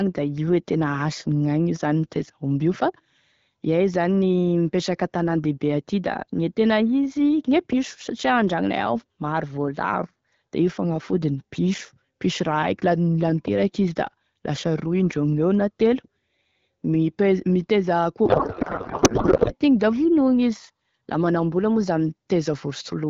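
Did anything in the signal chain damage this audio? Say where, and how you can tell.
Yes, at the codec stage: from 18.26 to 19.54 s the speech turns into garbled noise and warble that barely tracks it, a codec payload misread. It sounds like octet-aligned AMR frames being unpacked as bandwidth-efficient, so every field lands in the wrong place.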